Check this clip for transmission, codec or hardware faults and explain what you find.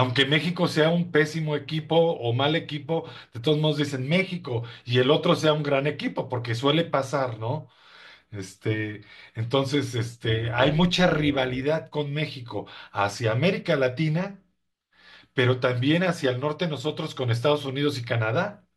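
Overlap-add ripple affects this speech from 10.29 to 11.63 s. The audio was split into windowed frames and rejoined with overlaps whose gains don't add up evenly, so the level swings about 6 dB once per frame, around 200 times a second. It sounds like a metallic buzz with extra tones around the voice.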